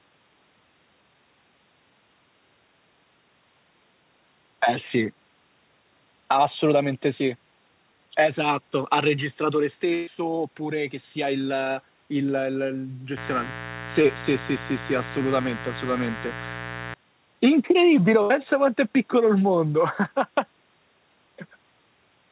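At 9.94 to 10.21 s there's a burst of packet loss. About 120 ms of speech went missing, and the receiver stretched the last sound into a fading buzz or hiss before jumping ahead. From 13.17 to 16.94 s a raspy 60 Hz mains buzz sits fairly loud under the speech, with spiky harmonics from a dimmer- or rectifier-type source. Inside that stretch, at 14.02 to 14.06 s, a short concealed packet loss patched a 20 ms hole, which you hear as a tiny smear. A second burst at 18.22 to 18.32 s drops about 80 ms the same way. All of this rides on the narrowband G.711 call path, with nothing above 4 kHz.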